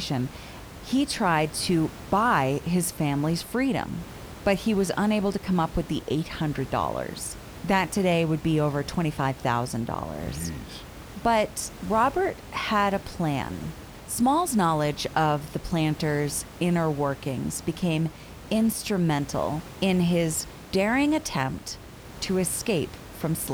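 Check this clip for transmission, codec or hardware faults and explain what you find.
No transmission, codec or hardware faults turn up in this clip, only the room's own background noise sitting about 17 dB below the speech.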